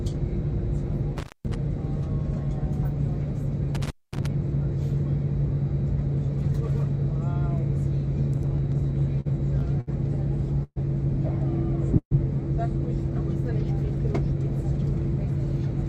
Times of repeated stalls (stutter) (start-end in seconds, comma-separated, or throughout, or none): 8.37-9.89